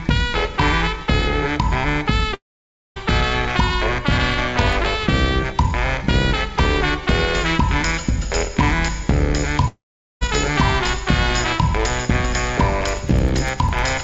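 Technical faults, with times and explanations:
2.34–2.98 s, long network dropout: the audio stream likely stopped arriving for about 0.62 s, so the receiver stretched the last sound into a fading buzz and then left roughly 0.56 s of silence before playback resumed further on, with that stretch gone.
9.68–10.23 s, long network dropout: a second likely gap in delivery, lasting about 0.54 s, is covered the same way, with a short decaying continuation of the preceding sound, then about 0.43 s of silence, and the audio picks up again without the lost portion.
12.89–13.89 s, periodic USB or driver dropouts: something stalls the audio driver or USB transfer every 0.1 s, blanking around a millisecond of signal each time, so roughly ten evenly spaced ticks are heard across this second.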